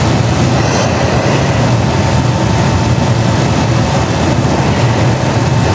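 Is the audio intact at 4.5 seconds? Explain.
No. At 4.5 seconds the audio shows gain pumping, which runs through the whole clip. The level keeps breathing, swinging by roughly 5 dB. Loud and soft parts sit closer together, so the sound feels squashed. The likely cause is input gain set far too high, with a fast limiter or compressor clamping down on every peak. The call path, cut off above 8 kHz, is not at fault.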